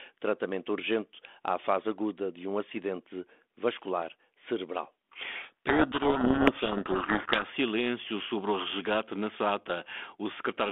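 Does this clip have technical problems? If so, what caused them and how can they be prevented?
Yes. A codec payload misread runs from 5.36 to 7.44 s, starting just after "um acidente vascular cerebral" and clearing before "silêncio sobre o resgate". Throughout that stretch the speech is buried under harsh distortion because the receiving side reads the G.726 code words with their bits in the wrong order. Each 4-bit difference value at 32 kbit/s is decoded as a different step, so the adaptive predictor tracks the wrong signal. The telephone band, roughly 250 Hz to 3.5 kHz, carries only light codec damage outside the fault. To prevent this, make both ends negotiate and agree on the G.726 packing, big-endian or little-endian bit order, before media starts.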